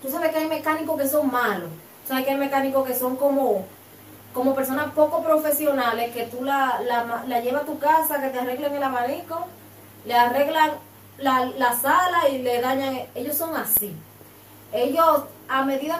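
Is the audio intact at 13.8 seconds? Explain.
No: an underrun with held sample occurs at 13.77 s. The output buffer ran dry, the converter held its last value flat for 0.73 ms, then playback resumed softly without skipping any audio.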